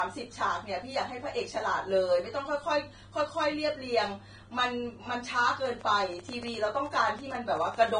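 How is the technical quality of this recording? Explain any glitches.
The recording has two technical problems: a dull, band-limited sound throughout and a burst of ticking near the end.

Throughout, the speech sounds muffled, with nothing above 9.7 kHz. This is likely low-bitrate audio saved at a high bitrate. The sound fits a roughly 23 kbit/s Vorbis original re-encoded as MP3 near 190 kbit/s, which cannot restore the lost detail.

From 5.66 to 7.89 s, a train of clicks ticks over the speech about 10 times per second at an irregular pace. There are roughly twenty clicks, peaking about 5 dB above the speech. The likely cause is electrical interference or a faulty connection or power supply injecting similar pulses.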